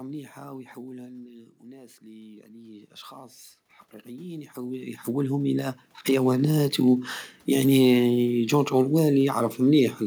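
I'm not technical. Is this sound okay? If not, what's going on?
No. Automatic gain rising occurs at 1.72 to 3.43 s and 4.02 to 6.55 s, just before "ويعني جورج": the system turns itself up, so voice and room noise swell together.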